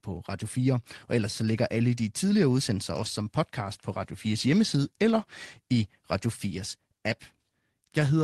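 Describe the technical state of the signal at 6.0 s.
At 6.0 s the speech is intact, with no dropout, glitch or other fault at that moment.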